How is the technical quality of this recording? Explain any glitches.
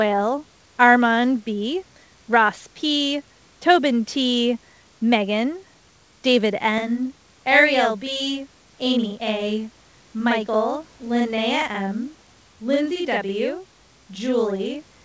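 The first part of the recording is clean, but from 6.78 s to the end the speech is doubled. Throughout, the call path's G.722 coding leaves nothing above 8 kHz, and room noise sits about 38 dB below the speech.

From 6.78 s to the end there is channel delay (doubling). One channel runs 46.44 ms late, which fits a 2048-sample buffer, and summing to mono layers both copies. Unlike room reverb, this is one distinct slap at equal level with no decaying tail.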